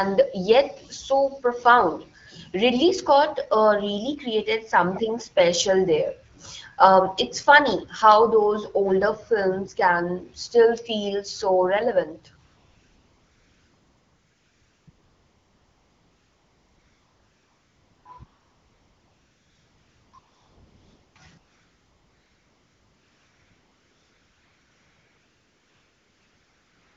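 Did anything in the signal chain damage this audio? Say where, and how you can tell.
Yes. From 12.45 s on, the phone's discontinuous transmission kicks in and you get AMR comfort noise, at 12.45–14.87 s, 14.89–18.05 s, 18.25–20.13 s, 20.19–21.15 s, and from 21.37 s to the end. The sender decided nobody was talking and stopped sending speech frames, so the receiver filled each gap with smooth, steady noise built from a rough sketch of level and spectrum. You hear the real background vanish and that bland hiss switch in and out between stretches.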